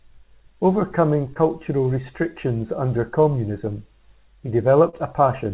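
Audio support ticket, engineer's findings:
Brief smear/wobble at 1.34–1.37 s and 4.89–4.95 s. Short concealed packet loss in the jitter buffer/decoder: about 20 ms and 40 ms missing, bridged by extending the preceding sound before crossfading back. Band-limited below 4 kHz via the call codec.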